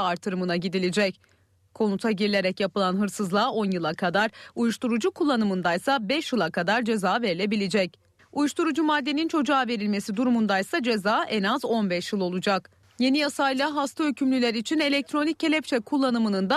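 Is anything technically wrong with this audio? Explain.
No, nothing technically wrong can be heard here.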